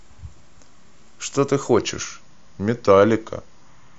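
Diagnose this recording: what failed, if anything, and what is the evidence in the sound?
At playback, a wrong sample rate from 1.79 s slows the speech to 0.92 speed and lowers pitch 1.5 semitones together, which fits 24 kHz audio played at 22 kHz. A pitch shifter would leave the tempo unchanged.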